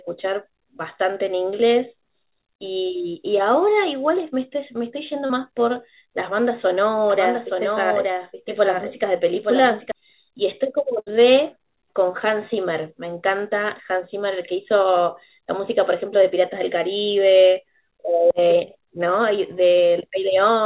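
At 5.26 to 5.31 s there is a short concealed packet loss. About 40 ms of audio never arrived, and the receiver filled roughly 34 ms by extending the preceding sound before blending back. It is heard as a brief smear in the speech.

From 7.10 to 9.92 s a doubled audio track appears. A second full-band copy, about 5 dB quieter, trails the original by roughly a second. It is dry, with no room colour, and starts and stops abruptly, likely from a slower duplicate capture path being mixed in.

At 10.99 to 11.20 s a burst of packet loss removes about 80 ms. The receiver held and faded the last sound for around 70 ms, giving a buzz or fading hiss. Speech then resumes further on, with the intervening part gone.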